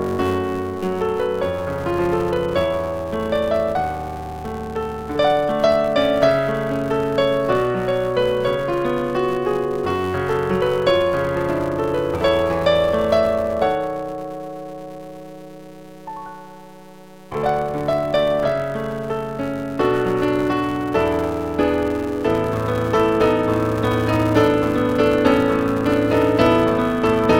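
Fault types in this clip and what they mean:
Filter restarted on every block: A filter loses its memory at each block boundary and starts again from silence. Each restart leaves a small transient. Here these merge into a steady 188 Hz buzz that rises and falls with the level, which fits 256-sample blocks.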